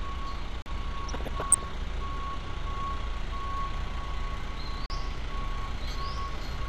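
The whole clip has a dull, gurgly graininess: MP2 compression, likely at a low bitrate around 80 kbps, with upper bands switched off and the remaining ones coarsely quantised. At 0.62 s and again at 4.86 s there's a block of digital silence, a 40 ms hole where the sound cuts out and back with no fade, the kind you get when the output buffer wasn't filled in time. From 1.05 to 1.64 s you get DAB burbling: bit errors at a modest rate, well under one percent, got past the error correction, so wrong samples put short blips of noise in single sub-bands.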